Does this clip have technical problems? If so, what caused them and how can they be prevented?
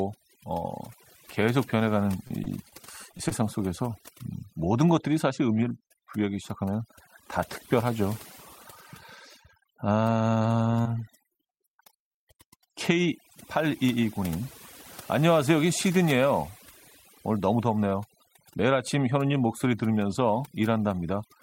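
Yes. Overdone noise removal runs through the whole clip: a noise reduction stage set far too aggressively treated any frequency band near its noise estimate as noise and cut it hard, taking quieter parts of the speech along with the background noise. The background drops and breaks up into twinkling specks. Setting a gentler reduction depth, or capturing a cleaner recording so less reduction is needed, prevents this.

Repeated packet loss (robotic sound) appears from 2.27 to 3.33 s and again from 10.83 to 11.41 s. In each stretch the network dropped or delayed audio repeatedly, and the receiver patched every hole by stretching the preceding sound. The first burst sounds like roughly half a dozen short holes, with about 0.11 s of audio synthesised in total. The second has around four, adding about 80 ms of fill. Individual holes last up to about 25 ms, and the rapid succession gives a choppy quality with fragments missing. 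A steadier connection, or a larger jitter buffer with forward error correction, prevents these dropouts.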